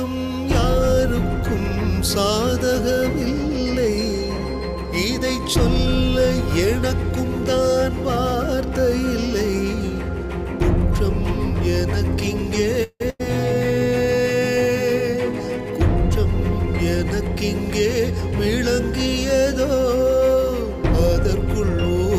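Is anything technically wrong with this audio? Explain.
Yes, two faults occur close together.

From 12.83 to 13.02 s there is a call audio freeze, likely from packets held up in transit so the jitter buffer ran dry. The receiver stretches the last sound into a fading buzz or hiss for about 170 ms, reaching silence near the end. The audio then resumes where it stopped, nothing lost but everything after it about 170 ms late.

From 13.10 to 13.21 s a burst of packet loss drops about 100 ms of audio. The receiver fills roughly 90 ms by continuing the last sound as a held, decaying buzz or hiss. The audio then picks up further along, with that stretch missing.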